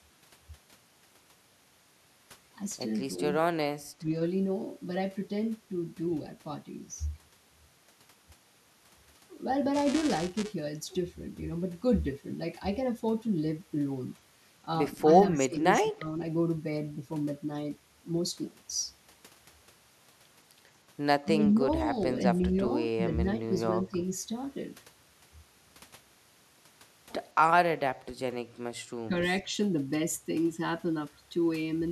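From 9.74 to 10.54 s there's buffer tearing: the writer and the hardware reader have slipped, so each period carries a small sliver of audio from about 10 ms earlier, hard-spliced in. You hear it as a robotic buzz at 375 Hz riding the speech, which fits a 128-sample buffer.

Then the speech keeps dipping at 15.32, 15.81, 21.22, 22.48, 22.96, 23.23 and 23.89 s. Level drops by up to about 25 dB in short chunks, most likely speech suppressed in double talk, where the echo canceller ducked the talker along with the far-end echo.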